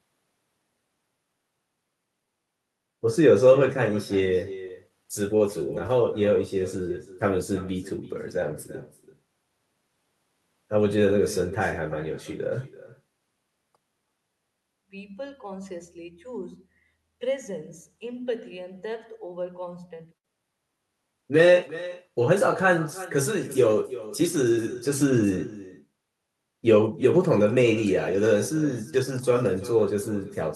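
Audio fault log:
Throughout: echo with no canceller. Every stretch of speech is followed by a second, quieter copy arriving roughly 300 ms later, at about 17 dB below the direct speech. The far end is evidently playing the call through a loudspeaker, and its microphone is picking that up and sending it back, with nothing in the path to subtract it. After the trip through the far room and back through the network, the returned copy sounds thinner than the original.
4.55 to 5.91 s: scattered short gaps. About seven small dropouts are spread across this span of under a second and a half. None is longer than about 20 ms, and together they account for roughly 100 ms of patched audio. The receiver covered each hole by extending the sound just before it, so no speech is actually lost. What comes through is a string of ticks and brief smears where the filled-in audio doesn't quite match the real signal.
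20.18 to 20.26 s: short stall from a late packet. A packet failed to arrive on time and the jitter buffer ran dry. The receiver held the preceding sound for 68 ms, then picked up again from where it stopped once the packet came in. Nothing is missing, but one sound is drawn out unnaturally, with a slight buzzy, frozen quality. From this point the playout delay is 68 ms longer.
21.21 to 22.11 s: jitter buffer slow-down. The speech plays at about 94% of normal speed with its pitch unchanged, adding 60 ms over less than a second. The receiver was rebuilding its reserve of audio by repeating single pitch periods and slivers of pause many times in a row. As a result, the speech sounds slightly dragged and stretched.
24.21 to 25.38 s: jitter buffer speed-up. The speech runs at about 107% of normal speed with its pitch unchanged, and roughly 100 ms is cut over just over a second. The buffer had collected more audio than its target, likely after a burst of delayed packets arrived together. 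To bring the delay back down, the receiver removed short pieces of one or a few pitch periods repeatedly, which makes the delivery sound hurried.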